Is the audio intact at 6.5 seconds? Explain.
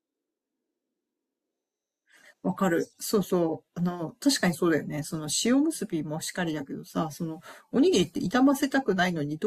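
Yes, the speech runs cleanly through 6.5 seconds with no dropout, click, distortion or other fault at that moment.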